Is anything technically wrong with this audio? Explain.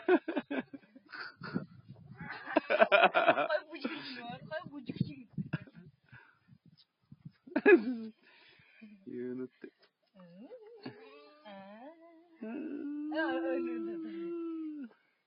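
Yes. Throughout, the level of the sound pumps and thins, with sustained parts sinking while attacks come through. This is a noise suppressor applied to music or sounds, misreading steady content as noise and swinging its gain by around 5 dB.

At 0.63 to 1.1 s, 1.82 to 1.97 s, 5.68 to 6.13 s, 6.35 to 6.76 s and 7.04 to 7.47 s, the sound is cut by the noise suppressor. Held portions and decays drop by about 12, 10, 12, 11 and 11 dB, leaving hollow dips and clipped tails.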